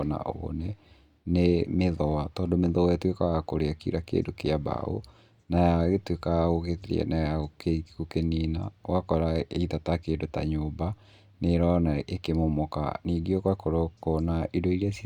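At 4.26 to 4.28 s, between "ya kũrĩa kira" and "kĩa mbaũ", a corrupt frame decoded produces a brief chirp, squeak or blip. Flipped bits in what sounds like a single compressed frame were decoded anyway, so wrong gains or misread codes placed energy at the wrong frequencies for that frame's length. On a spectrogram it shows as a short, sharp-edged smear unrelated to the surrounding speech harmonics; the waveform carries a small irregular burst peaking around -35 dBFS.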